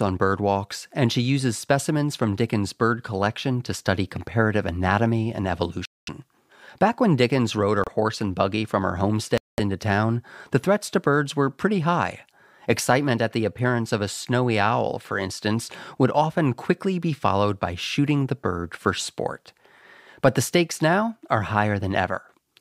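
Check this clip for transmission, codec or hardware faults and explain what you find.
The speech cuts out three times. Bluetooth stall is the likely cause: at 5.85, 7.84 and 9.38 s, gaps of about 0.22 s, 30 ms and 0.2 s, where the headphone buffer ran dry awaiting resent packets.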